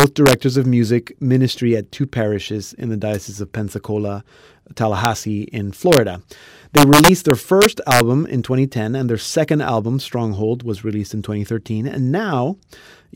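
A gain stage lets the sum run past the largest integer value, and instead of being held at the limit the sample wraps to the opposite sign. This integer overflow cracks the speech from 0.00 to 0.33 s, about 2 dB over, at 5.05 s, about 1 dB over, from 5.93 to 5.97 s, right at the limit, and from 6.77 to 8.00 s, about 4 dB over, where the loud peaks snap violently, far harsher than clipping.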